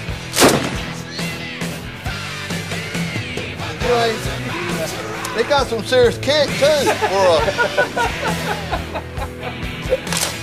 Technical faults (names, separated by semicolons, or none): none